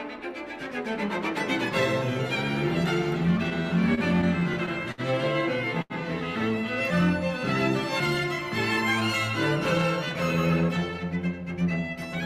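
From 3.37 to 5.01 s the sound stutters in repeated stalls: eleven times the jitter buffer runs dry and the receiver extends the last sound, 165 ms in all, the longest gap 61 ms. A spectrogram shows brief smeared, repeated stretches interrupting otherwise continuing patterns.

At 5.82 to 5.93 s a single late packet causes a short stall. Playback holds the preceding sound for 80 ms before resuming where it left off. The waveform shows a periodic, copied-looking segment, and the spectrogram a flat horizontal smear.

Between 10.61 and 11.55 s a jitter buffer speed-up trims surplus queued audio, removing small pitch-period pieces repeatedly to play at 110 percent, about a tenth of a second overall. Pitch stays put, but the passage sounds hurried, and spectrogram events sit slightly compressed in time.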